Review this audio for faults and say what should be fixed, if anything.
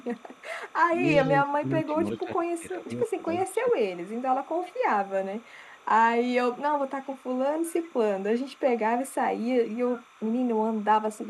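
Timecode bleed runs under the whole clip: a steady chirping warble flipping between roughly 1 kHz and 2 kHz, sitting around 30 dB below the speech. That's linear timecode leaking in from a neighbouring track or cable, and its rhythm fits 29.97 fps code. Because the code is a square wave, it keeps flipping between those two pitches as the bits change. To prevent it, route timecode on a separate, well-shielded run and keep it off tracks adjacent to program audio.

Echo leak shows up as a delayed copy of the speech trailing the original by 359 ms. It's there from the start to 1.29 s, again from 3.52 to 4.79 s, briefly from 5.39 to 5.85 s, and then from 6.57 s to the end. It sits about 25 dB down in the first two stretches, closer to 35 dB down in the short one, and around 30 dB down at the end. This is likely a far end on loudspeaker whose echo canceller let part of its mic pickup through and sent it back. 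To prevent it, have that side use a headset or fix its echo cancellation.

Speech suppressed in double talk hits between 1.45 and 3.77 s. The speech dips and loses bits in pieces, about a second of it in total, dropping by as much as roughly 15 dB at the worst point. The likely cause is both sides talking at once, so the echo canceller couldn't separate the local talker from the loudspeaker echo and ducked everything. To prevent it, use a headset on the far end so the canceller isn't fighting speaker echo during overlaps.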